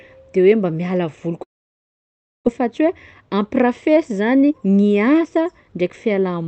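At 1.43 s, right after "hoe mba miala voly", the speech stops. A brief buzzy continuation of the last sound fades quickly, and then there is near silence for about a second. The speech returns at 2.49 s. About 600 ms of it is simply gone. This is most likely a long network dropout. Packets stopped arriving, the receiver filled the gap, and the audio resumed from a later point.

From 2.56 s to 5.82 s, the speech runs about 13% fast while the pitch stays the same. It sounds hurried. This is a jitter buffer speed-up. After the dropout, the buffer held roughly 400 ms more audio than it wanted. The receiver trimmed short pitch-period slices over and over until it had cut about that much. The speech comes through an Opus call path with an 8 kHz bandwidth.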